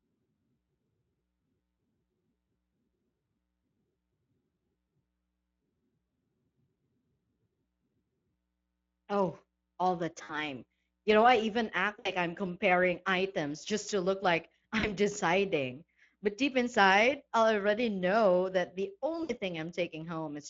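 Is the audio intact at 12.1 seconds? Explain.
No. Between 11.99 and 12.11 s, just after "know I even act" and before "I'm comparing items just", VoIP packet loss concealed by the speech codec occurs. About 60 ms of audio never arrived, which fits three lost 20 ms frames. The decoder filled the gap by extending its last pitch and spectral envelope while lowering the gain frame by frame. This stretches the sound into a fading buzzy or coloured-noise smear. Because each frame depends on the previous one, the speech stays weak or distorted for tens of milliseconds or more after packets resume.

That moment also carries the Speex codec coloration present throughout the clip. The encoding, which fits a bitrate of around 20 kbps, still leaves plainly audible damage. The speech sounds noisy and hoarse because the CELP coder has too few bits to reproduce the excitation signal faithfully.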